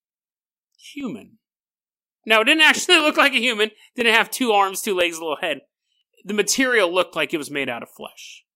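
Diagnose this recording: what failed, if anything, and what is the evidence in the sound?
Driver or buffer stage: periodic USB or driver dropouts. Brief ticks recur once per second from about 1.0 s to 8.0 s in the speech. Each time, a fraction of a millisecond of audio is skipped. A blocking background task on the USB or audio driver path is the cause.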